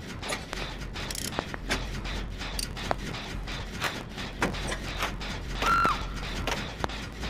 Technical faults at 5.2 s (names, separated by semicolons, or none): block size mismatch (truncated)